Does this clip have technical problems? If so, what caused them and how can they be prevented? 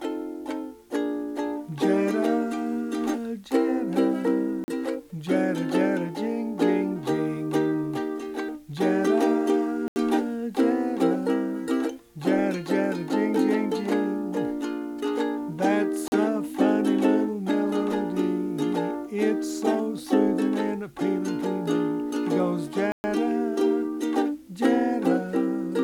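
Yes. The sound drops out four times in a block of digital silence: at 4.64 s for 40 ms, 9.88 s for 80 ms, 16.08 s for 40 ms, and 22.92 s for 120 ms. Each gap starts and ends abruptly, and the longer gaps come across as short holes rather than ticks. All four lengths are multiples of 40 ms, which points to whole output buffers of about that duration going unfilled. Giving the audio thread higher priority and a larger buffer margin prevents these dropouts.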